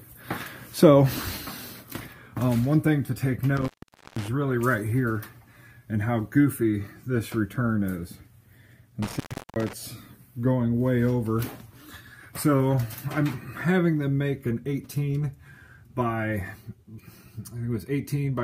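Intermittent contact at 3.57–4.28 s and 9.03–9.73 s: a loose cable or plug briefly opens, so the audio breaks out for about 0.48 s and 0.36 s, with crackle at the edges and hiss during each gap.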